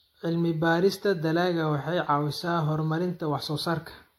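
Speech that sounds swirly, hollow and smeared throughout, with blurred consonant attacks. This is generation loss, likely from about three passes through lossy encoding that fits a 64 kbit/s AAC-LC chain. A spectrogram shows nothing above 16.6 kHz, patchy holes and smeared onsets.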